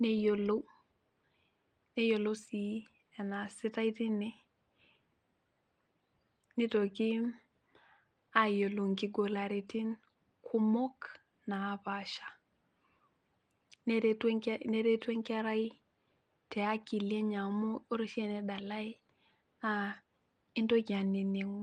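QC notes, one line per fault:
No faults found; the speech runs through Opus voice coding at 24 kbps in hybrid mode with the full band retained.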